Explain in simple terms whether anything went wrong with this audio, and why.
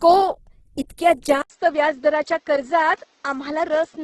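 Yes, two things went wrong. The whole recording sounds grainy and rough, with the sparkle at the top cut off above about 12 kHz. That's likely Opus compression squeezed hard: the encoder keeps the overall shape of the sound but fills in detail with noise.

Then at 1.42 s the sound drops out for about 80 ms and comes back duller, a bit quieter, with a faint new hiss and nothing above about 7.6 kHz. That's the input switched to a poorer device, likely another mic or a headset taking over.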